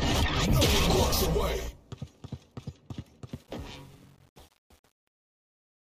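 Truncation distortion on a fade runs from 3.33 s to the end at 5.95 s, worst from 3.5 s onward. The fade-out starts around 3.3 seconds, but the stage producing it keeps only 8 bits with no dither. As the level falls toward the smallest step, the waveform collapses into coarse square steps, so the tail turns gritty.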